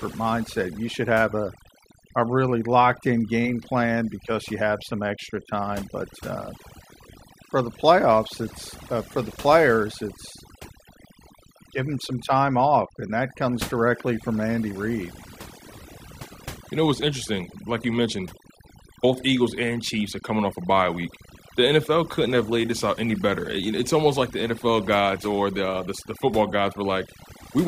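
Speech with overdone noise removal running throughout: the reducer gates individual frequency bands whenever they sit near its noise estimate, so pauses collapse to near-silence sprinkled with twinkling specks. A spectrogram shows scattered isolated dots and ragged, hollowed-out harmonics.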